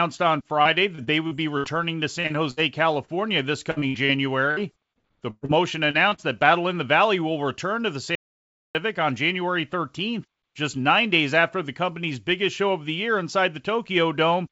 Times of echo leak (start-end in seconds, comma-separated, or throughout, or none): none